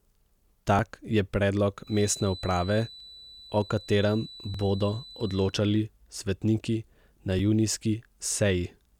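Speech recording. The capture likely fell behind and let the hardware overwrite its buffer at 0.79, 3.00, 4.54 and 7.39 s, so a few milliseconds vanish each time as a dropped buffer (overrun), heard as a small skip forward. A loudspeaker-to-microphone loop likely sat at the edge of feedback from 1.80 to 5.57 s, leaving a thin, slowly swelling and fading 4 kHz feedback whistle some 20 dB beneath the speech.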